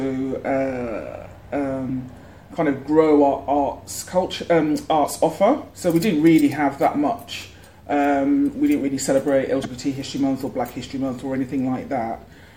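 Damaged data in the compressed stream twice leaves the decoder unable to read its frames, so it loses sync and hunts for the next frame header. Each is a brief glitch in the sound, at 5.03 to 5.07 s and 9.61 to 9.65 s, each about 40 ms long.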